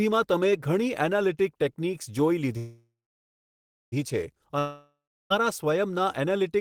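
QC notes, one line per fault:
2.57–3.94 s, call audio freeze: the last sound trails off as a fading buzz, then about 1 s of silence. Audio resumes intact, only 1.35 s late. Likely a jitter-buffer underrun.
4.59–5.32 s, long network dropout: the sound fades into roughly 0.35 s of silence, and about 0.72 s of audio never returns, likely lost packets.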